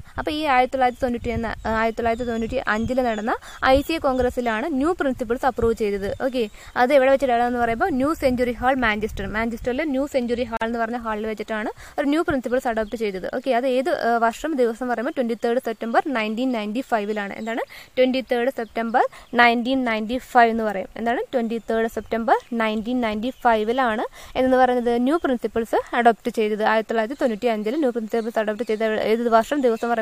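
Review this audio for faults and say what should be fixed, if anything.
A gap at a join of encoded pieces opens at 10.57 to 10.61 s: a 44.7 ms gap with smeared edges, so the silent part is shorter. Separately encoded pieces kept their encoder start delay and last-frame padding. To fix it, trim that delay and padding before joining, or encode the material in one run.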